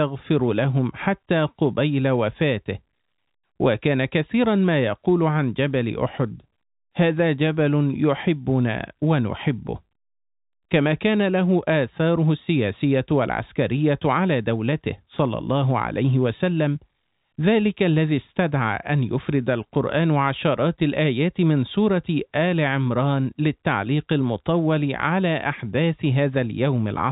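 Speech over a G.711 telephone path, band-limited below 4 kHz as that coding dictates, with nothing technically wrong to report.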